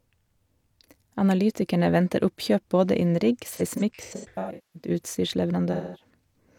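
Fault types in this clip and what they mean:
AAC frame loss with concealment: at 3.53–4.89 s and 5.72–6.10 s, dropped frames are rebuilt from the last good spectrum, leaving smeared, noisy patches of up to roughly a fifth of a second.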